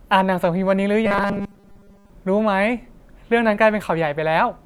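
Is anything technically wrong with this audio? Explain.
Yes. From 1.06 to 2.10 s the speech takes on robotic sound from repeated short buffers: a stiff, metallic buzz at 200 Hz that loosely tracks the words. That's likely fresh audio arriving late, with roughly 5 ms snippets replayed in place of most of the real signal.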